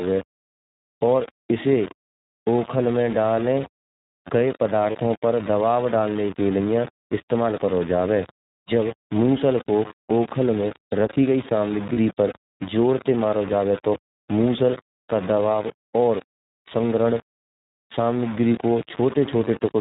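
Across the whole speech clip, a coarse grain rides on every sound. It follows the speech and changes with it. Quiet stretches turn gritty and sputter between two levels, and the softest parts collapse to silence. The error sits only about 15 dB below the signal. The likely cause is low bit depth without dither: samples rounded to very few levels, which fits about 4 bits, with no noise added to decorrelate the error.

The speech is also band-limited. Nothing above 4 kHz survives, and the result sounds rough and slightly synthetic. This is the iLBC codec, a narrowband VoIP coder that codes each 30 ms frame's excitation on its own. The damage is plainly audible here, and the 30 ms frames fit the 13.33 kbps mode.

At 4.92 to 4.96 s the sound briefly smears into a held, faintly buzzy tone. This is lost iLBC frames. The decoder filled the gap by repeating the last pitch cycle mixed with noise. 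The gap lasts 30 ms, which fits a single lost frame. Because iLBC frames stand alone, the speech recovers at once.

The same lost iLBC frames fault returns at 11.94 to 11.97 s, after "रखी गई" and before "पर जोर ते मारा". Again 30 ms is concealed with a short, breathy held vowel. Normal speech resumes immediately afterwards.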